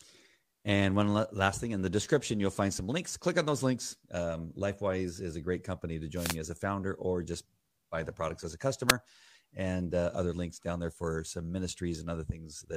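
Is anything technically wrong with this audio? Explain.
Yes. Wireless microphone noise hits occur from 6.15 to 6.37 s, after "a great company to", and from 8.88 to 8.93 s, after "the products as a". Multipath reflections fade the analogue FM signal, so receiver noise surges into brief static swishes.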